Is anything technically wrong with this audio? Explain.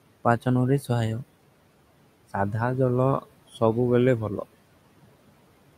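Yes. Noise suppressor artifacts run through the whole speech clip. The suppressor estimates the steady room noise, which sits about 19 dB below the speech. It then pulls down each frequency band it judges to be noise, frame by frame, by about 18 dB. So the background drops away in the gaps and swells back under the voice.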